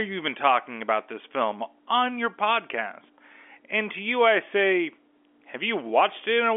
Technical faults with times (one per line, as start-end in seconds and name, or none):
none